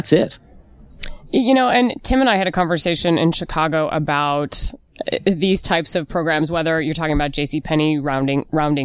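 No technical faults are audible.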